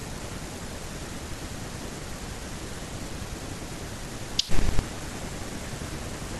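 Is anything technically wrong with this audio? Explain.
No, nothing technically wrong stood out on listening to this speech recording.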